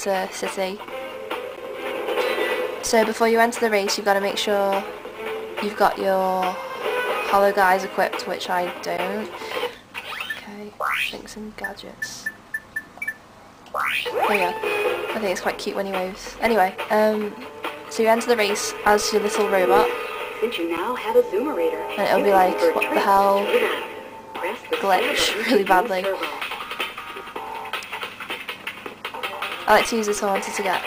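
Block of digital silence at 1.56 s, 8.97 s and 20.77 s: the audio drops out abruptly for about 11.6 ms, 11.6 ms and 8.7 ms. The first two gaps fit a 512-sample buffer that went unfilled. Each gap is too short to read as silence and is heard as a tick or dip.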